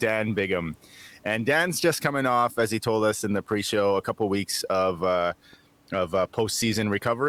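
Nothing has gone wrong with this speech recording, and the only thing underneath it is the room's own background noise, sitting about 37 dB below the talking.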